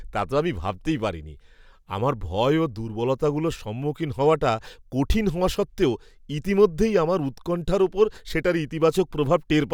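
No technical faults can be heard anywhere in the recording, and the speech comes through as a steady, unbroken signal.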